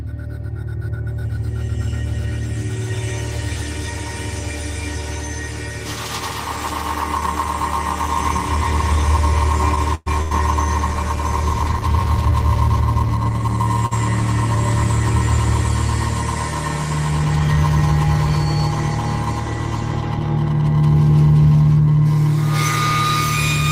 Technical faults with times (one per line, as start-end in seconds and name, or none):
9.95-10.08 call audio freeze
10.22-10.33 short stall from a late packet
13.86-13.93 short stall from a late packet
17.11-17.57 jitter buffer speed-up